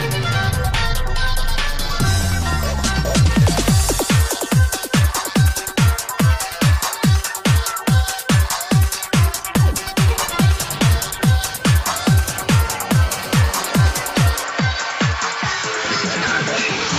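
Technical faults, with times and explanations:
14.44 to 16.99 s, input switched to a poorer device: the sound abruptly loses everything above 7.6 kHz, drops about 5 dB and gains faint background noise, likely from another microphone taking over.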